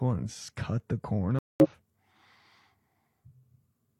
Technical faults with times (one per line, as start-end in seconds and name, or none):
1.39-1.69 corrupt frame muted